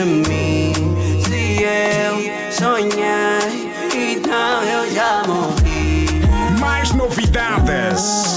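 There are no technical faults to describe in this audio.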